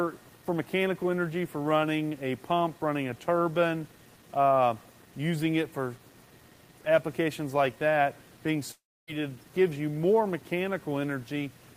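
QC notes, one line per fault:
Throughout: low bit depth without dither. Quiet passages turn gritty and grainy, and the distortion shifts with the sound, with the faintest parts sputtering or dropping out. This is likely 8-bit rounding without dither, leaving error roughly 30 dB below the signal.
8.71 to 9.10 s: long network dropout. The sound breaks into a fading buzz-like continuation, then about 0.26 s of silence before returning without the lost portion. This likely happened because roughly 0.36 s of audio never arrived and the receiver briefly filled the gap.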